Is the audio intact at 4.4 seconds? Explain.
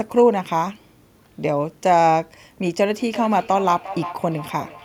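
No, feedback echo between two devices runs from 2.84 s to the end: a second device's playback re-enters the microphone, so speech returns roughly every 400 ms, thinning and ringing, at about 13 dB below the speech.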